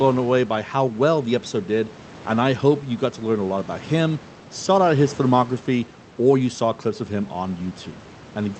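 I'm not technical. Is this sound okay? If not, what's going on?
Yes, nothing in this recording sounds wrong.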